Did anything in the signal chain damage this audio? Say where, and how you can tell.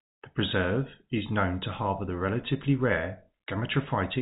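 No, nothing in the chain has damaged this speech; it simply carries the narrow, sub-4 kHz sound of G.711 telephone coding, which fits an ordinary 64 kbps mu-law line.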